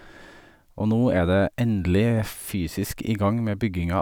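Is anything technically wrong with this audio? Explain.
No technical faults are audible.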